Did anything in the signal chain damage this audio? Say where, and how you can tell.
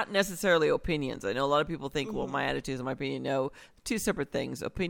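No, nothing in the signal chain has damaged this speech recording, and the signal stays continuous and intact throughout.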